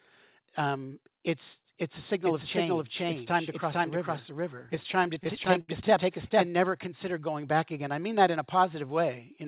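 A speech clip carrying a doubled audio track from 2.24 s to 6.47 s: a second, full-band copy of the speech runs roughly half a second behind at about the same level. It has no reverberant tail or room colouring, and it starts and stops abruptly at those edges, so it is an identical copy rather than an echo. The likely cause is the same signal being captured a second time through a slower path, or an edit leaving two copies out of alignment. Inside that stretch, from 4.58 s to 5.70 s, repeated stalls (stutter) make the speech drag and catch fourteen times. Each gap is bridged by stretching out the last sound, with the longest hold lasting 73 ms. About 201 ms are filled this way, close to a fifth of that span, and nothing is actually dropped. This happens when packets arrive late or too slowly and the jitter buffer runs dry again and again. The call-codec band limit, with nothing above 4 kHz, fits G.711 mu-law.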